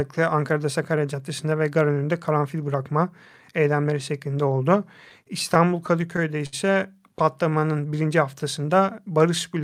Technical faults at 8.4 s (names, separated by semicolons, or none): none